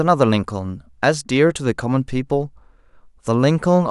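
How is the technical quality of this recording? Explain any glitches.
Nothing goes wrong anywhere in this speech recording, so there's no glitch to explain.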